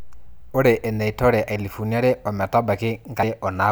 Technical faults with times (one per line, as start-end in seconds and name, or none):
1.56 damaged data in a compressed stream
3.23 damaged data in a compressed stream